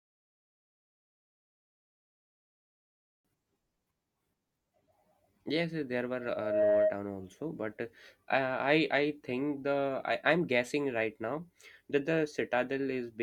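Speech, with a loudspeaker feedback squeal from 6.19 s to 7.0 s, just before "also but": a 627 Hz tone swells over roughly 0.4 s to about 5 dB above the speech, a microphone-loudspeaker loop exceeding unity gain, seen as one bright horizontal spectrogram line.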